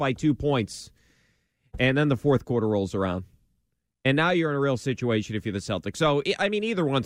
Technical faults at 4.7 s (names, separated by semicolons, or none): none